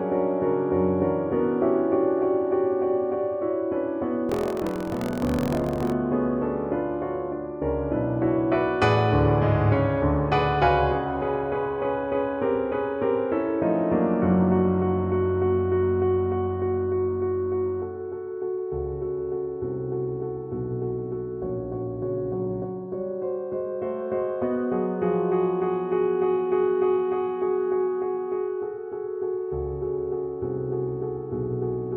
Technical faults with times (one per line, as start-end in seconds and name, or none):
4.27-5.94 buffer tearing